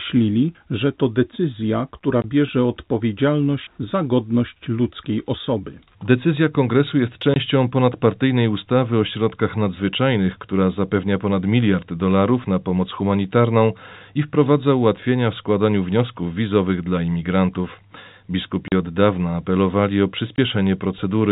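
Speech carried over a G.711 telephone path, band-limited below 4 kHz, is broken by packet loss filled with silence at 2.22–2.24 s, 7.34–7.36 s, 18.68–18.72 s and 20.36–20.38 s. Each gap is a sudden dead hole with hard edges, 20 ms long, or 40 ms at 18.68 s, which fits whole 20 ms packets going missing. These exact multiples of one packet length and the true silence inside them set this apart from concealed loss, which would fill the gap with smeared or repeated sound.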